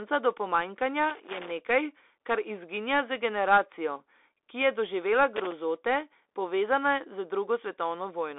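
Throughout, the speech carries Bluetooth CVSD headset codec damage: the narrowband one-bit delta coding leaves nothing above 3.8 kHz, adds granular hiss and scratchy sibilants, and the spectrogram shows a flat ceiling at that frequency, which fits 64 kbit/s CVSD. From 1.10 to 1.52 s, just after "do pomanjkanja", and again from 5.36 to 5.52 s, loose connector crackle breaks in: an unstable contact chops the signal, giving irregular scratching heard as bursts, with dropouts and sharp spikes in the waveform and broadband vertical streaks on the spectrogram.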